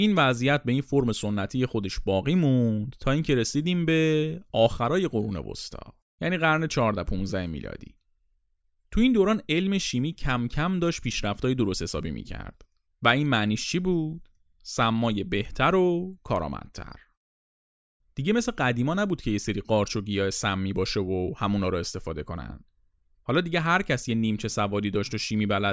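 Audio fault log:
Nothing turned up here, so there's no fault to log for this speech clip.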